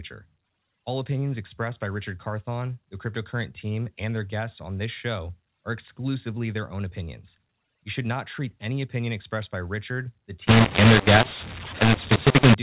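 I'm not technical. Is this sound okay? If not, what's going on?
No. Most of this telephone-quality speech plays as expected, but from about 10.47 to 12.54 seconds it turns harsh and gritty, and the quiet gaps fill with hiss. That is a mu-law and A-law mix-up. Phone audio is stored using one of two similar rules for squeezing loudness into small numbers. This stretch was stored with the A-law rule but played back using the mu-law rule, so loud and soft moments are scrambled and near-silence comes out as noise.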